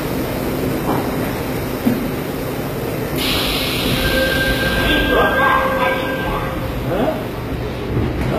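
Throughout, the treble sounds gritty and metallic and ends at 14.9 kHz, likely from HE-AAC compression at a very low bitrate, which rebuilds the top from copied lower bands.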